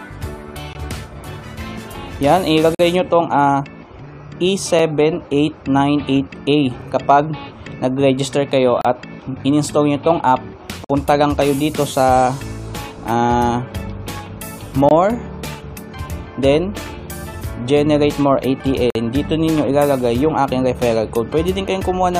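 Short holes of silence punch through the sound at 0.73–0.75 s, 2.75–2.80 s, 4.79 s, 6.81 s, 8.81–8.85 s, 10.84–10.90 s, 14.89–14.91 s and 18.90–18.95 s. That's a gap between stream segments. The timestamps of neighbouring 2-second chunks don't quite meet, and the player pads the difference with silence, anywhere from about 3 to 51 ms. The edges are hard, so each one reads as a clean dropout on a roughly 2-second beat.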